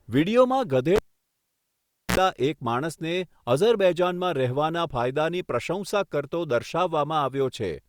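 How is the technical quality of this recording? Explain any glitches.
The recording has one clear glitch in this speech clip. A cable pulled and plugged in runs from 0.96 to 2.17 s: a live lead comes out with a pop, leaving about 1.16 s of near silence. As the plug goes back, the tip alone contacts first, letting in a 59 ms burst of 60 Hz mains buzz before a second pop restores the signal.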